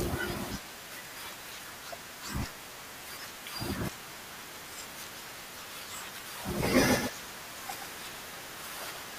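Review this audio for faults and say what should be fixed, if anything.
From 6.89 s to the end, the speech suddenly gains a hard, clean echo: a second full-band copy trails about 150 ms behind, a few dB quieter, with no decay or room colour, and it switches on abruptly. This is a doubled audio track, likely from the same signal being captured again through a slower path and mixed back in. Prevention: route each source through only one capture path and mute any duplicate monitor or loopback feed.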